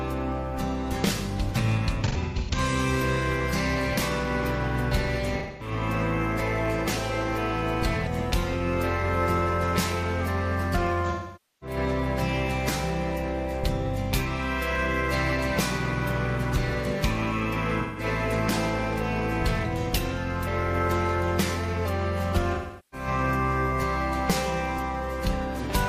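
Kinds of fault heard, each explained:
AAC frame loss with concealment: compressed frames went missing and the decoder guessed from the last good spectrum, giving five brief smeared, noisy patches.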